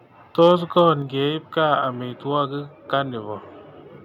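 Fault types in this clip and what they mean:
Microphone overload: Around 0.40 to 0.52 s and again at 0.78 to 0.89 s, the loudest peaks get their tops flattened, giving a harsh, crackly edge to those moments of speech. The likely cause is the mic input being set too hot, so the signal runs past the converter's ceiling, by about 2 dB the first time and about 1 dB the second. The first burst is rougher, with a few percent of samples clipped, while the second only shaves a small fraction.
Microphone volume stepped down: At 1.02 s the whole level, voice and background alike, drops abruptly by about 4 dB in a single step rather than fading. Coming right after those two clipped peaks, it sounds like the call software likely caught the overload and pulled the device's input gain down to stop it happening again. From that point on, the speech sits quieter than it did at the start.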